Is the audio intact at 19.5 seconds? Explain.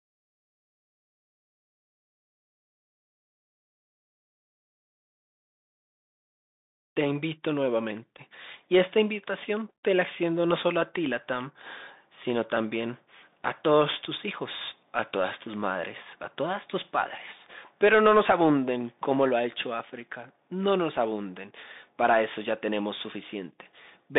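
No. At 19.5 s, as across the whole speech clip, the Bluetooth CVSD headset codec is in the path. CVSD sends one bit per sample, at a rate that fits 64 kbps, saying only whether the wave rises or falls, with an adaptive step size. The line band runs about 150 Hz to 3.7 kHz, with nothing above 3.8 kHz. Loud high sounds outrun the step and distort, s sounds turn scratchy, and a granular hiss sits under the speech.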